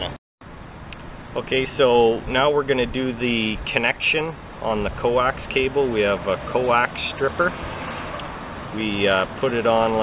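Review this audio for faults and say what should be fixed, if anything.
Nothing stood out on listening, so there is nothing here that needs fixing.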